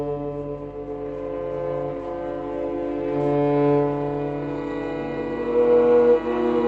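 No technical faults can be heard in this music.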